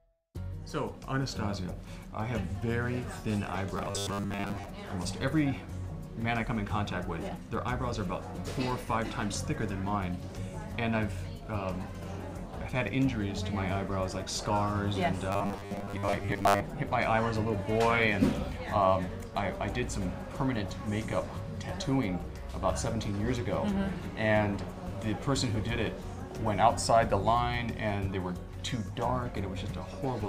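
Twice, from 3.77 to 4.66 s and from 15.32 to 16.60 s, new audio likely arrives too slowly, so short buffers get repeated and most of the real sound is skipped. The result is robotic sound from repeated short buffers: a rigid, metallic 100 Hz buzz, which fits a 10 ms buffer.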